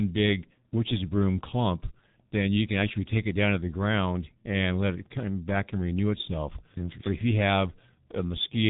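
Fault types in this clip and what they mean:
G.723.1 codec: a low-rate telephony codec, fitting about 6.3 kbit/s, removes everything above 3.8 kHz, leaving the speech heavily muffled and hoarse with smeared consonants throughout.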